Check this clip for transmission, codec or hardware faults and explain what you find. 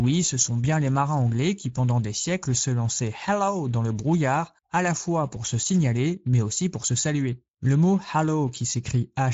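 The clip carries one fault, Speex codec damage, present for its full length. A CELP coder with a thin excitation budget, which fits roughly 16.8 kbps, makes the speech plainly hoarse and noisy. A spectrogram shows a hard ceiling near 7.6 kHz with nothing above it.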